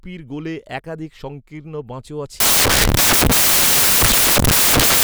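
Speech that, from 2.40 s to the end, turns into loud, harsh broadband noise: samples built from the wrong bytes, low-order bits becoming the large part of each value.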